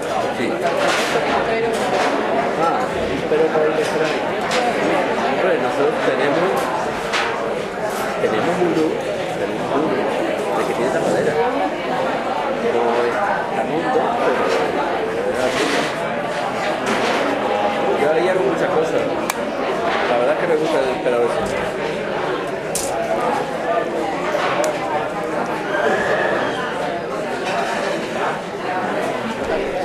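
Nothing stood out as a technical fault on listening to these everyday sounds.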